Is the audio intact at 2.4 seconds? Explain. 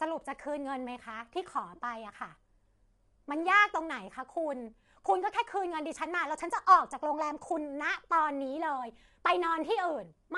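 No. At 2.4 seconds the speech sounds rough and grainy, with a hiss-like fill between the pitch harmonics and nothing at all above 11.6 kHz. This damage runs through the whole clip and is plainly audible. The likely cause is low-delay AAC compression (AAC-ELD), which codes about 500 frequency lines a frame with a low-delay window, so at a rate that points to roughly 32 kbps the encoder has too few bits for them, fills between the harmonics with noise and drops the top band.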